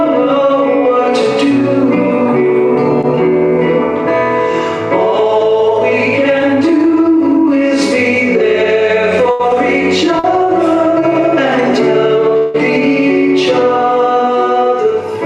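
At 3.01 to 3.05 s and again at 10.19 to 10.25 s, short concealed packet loss occurs: about 20 ms and then 40 ms of audio never reached the decoder in time. The receiver bridged each hole by extending the preceding sound and blending back, so each shows as a brief smear or wobble.

Between 9.31 and 9.41 s, a burst of packet loss removed about 80 ms. The decoder held the last sound and let it fade across the gap, giving a short buzz or hiss before the audio resumes slightly further on.

From 12.37 to 12.56 s, the audio drops for about 160 ms, likely a long network dropout. The concealment stretches the last sound over the whole gap as a fading buzz or hiss, with no silence left, then the audio returns with that stretch missing.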